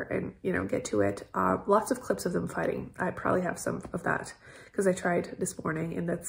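Nothing stood out as a technical fault on listening.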